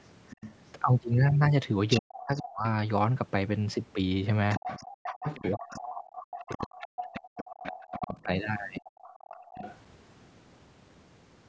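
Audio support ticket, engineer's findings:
Other side's voice leaking through: second talker audible at 0.3–0.51 s (faint, about 20 dB under), 1.9–2.42 s (nearly as loud as the talker) and 4.5–9.77 s (about 15 dB under). Likely residual echo from the loudspeaker. A separate voice layered in, not a dip in the main talker, which is how it differs from suppression.

Speech suppressed in double talk: talker's level drops sharply, roughly 40 dB at worst, across 1.99–2.65 s and in pieces over 5.41–9.35 s, about 2.7 seconds lost in all. Coincides with the leaked voice, so likely the echo canceller muting both sides during simultaneous talk. Speech itself chopped, unlike background gating.

Background gated by the echo canceller: room sound drops out at 4.86–5.03 s, about 40 dB deep, roughly 150 ms, then returns. Canceller clamping the microphone while the loudspeaker plays. Band limit at 8 kHz is normal call processing.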